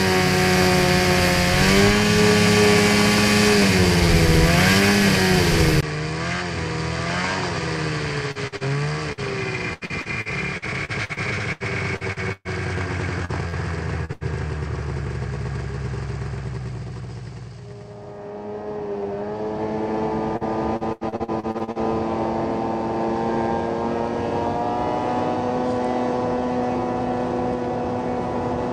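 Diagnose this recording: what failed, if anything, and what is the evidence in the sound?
At 5.81 s the audio drops out for about 20 ms and comes back duller, with nothing above 8.9 kHz, about 10 dB quieter and with a new noise floor underneath. That's most likely the input switched to a poorer device at the driver level, staying there to the end.

Then there's repeated packet loss (robotic sound) on the network side, from 8.31 to 12.48 s, 13.25 to 14.24 s and 20.37 to 21.78 s. The concealer keeps stretching the last sound over each hole, up to 126 ms long, so a fifth to nearly a third of those stretches comes out choppy.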